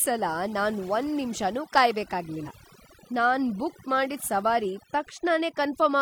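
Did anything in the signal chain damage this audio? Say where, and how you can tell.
Yes. Overdone noise removal hits the whole clip at the call-processing or restoration stage. The background sits near silent, with twinkling specks. Bands near the noise estimate were cut hard, taking quiet speech detail with them.

Damaged data in a compressed stream hits the codec and storage stage. It is heard from 2.42 to 2.48 s as a short glitch. Corrupt bytes made the decoder misread frames, lose sync and hunt for the next header.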